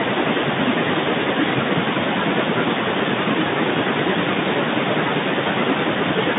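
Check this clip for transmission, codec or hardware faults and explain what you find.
One fault runs through the whole clip: speech cut by the noise suppressor, from 0.00 s to about 6.39 s. Soft consonants and word endings sound swallowed, and quieter stretches fade toward the background, dipping by about 12 dB at the deepest point. The suppressor is mistaking low-level speech energy for noise and attenuating it along with the room noise. That room noise sits about 22 dB below the speech, and the speech is band-limited to the telephone range of 150 Hz to 3.7 kHz.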